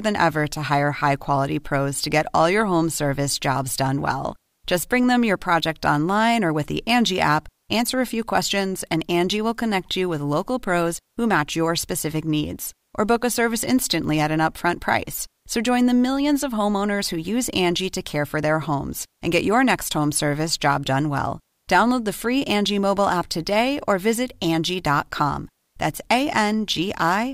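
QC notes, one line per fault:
No technical faults were heard anywhere in the clip.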